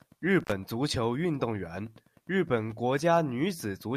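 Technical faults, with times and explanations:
0.40 to 0.52 s, intermittent contact: the speech drops out for a moment just before "足球运动", with a short crackle on either side of the gap. That's a loose cable or plug briefly losing its connection. The line is open for about 56 ms, and during that time a faint hiss gets through. The crackles are the contact scraping as it breaks and then meets again, so you get ragged little bursts instead of a clean cut.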